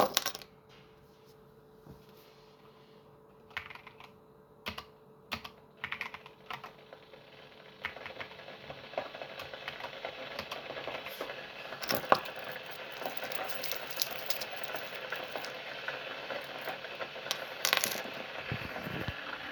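No technical faults are audible.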